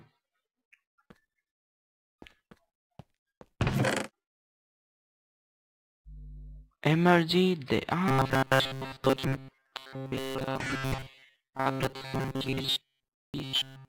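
From 8.08 s to the end, the sound turns into a rigid metallic buzz at 133 Hz, a robotic sound from repeated short buffers, likely caused by a ~7.5 ms chunk being looped while most of the real audio is skipped. A spectrogram shows flat, evenly spaced harmonic lines; the waveform repeats identical cycles.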